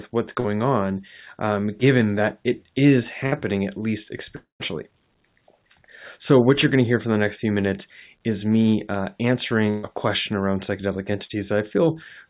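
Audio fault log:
0.40 s and 11.25 s: short concealed packet loss. About 40 ms of the call went missing each time. The receiver filled each hole by carrying on the last sound, from its pitch where it was voiced and as shaped noise where not. It then blended back into the real audio. Each one is a brief smear or wobble. A very short sound at either point can drop out entirely.
3.26 to 3.34 s and 9.70 to 9.85 s: burst of packet loss. The first gap loses about 60 ms and the second about 140 ms. Several packets in a row failed to arrive in time. The receiver kept repeating the last sound and turned it down as each gap went on. A voiced sound becomes a held buzz and anything else a fading hiss. The audio then resumes further on, with the stretch in between gone.
4.36 to 4.62 s: long network dropout. About 240 ms of audio is missing, likely because nothing reached the receiver over that stretch. 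The last sound is drawn out and fades away. Then about 130 ms of silence follows. The audio comes back further on, without the lost part. Across all these gaps, nothing sounds above 4 kHz, which fits the narrowband G.711 A-law call path at 64 kbps that carried the audio.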